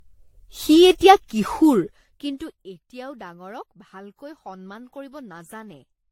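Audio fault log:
Throughout: generation loss. The speech sounds swirly, smeared and hollow, with blurred consonant onsets, and nothing above 16.5 kHz. This points to lossy encoding repeated about seven times, likely an AAC-LC chain at roughly 64 to 73 kbit/s. Each pass quantised the signal again on a shifted frame grid, so noise piled up beyond what a single encode at that rate would leave.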